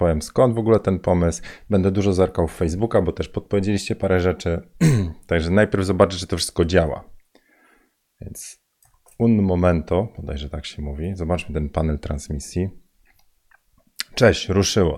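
No technical faults can be heard in the speech recording. There is nothing to mark at any point along it.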